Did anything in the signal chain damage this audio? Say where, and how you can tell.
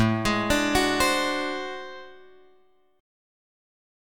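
No, nothing in the signal chain stood out as having damaged this audio when I listened.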